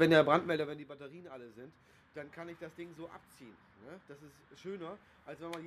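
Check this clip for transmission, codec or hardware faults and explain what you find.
One fault is present, zipper noise. From 0.4 to 0.88 s, the level drops by roughly 20 dB in steps of about 2 dB, at around twenty steps a second. Nothing smooths the jumps between them. Each jump clicks, so a fast ticking rides on the sound as it fades.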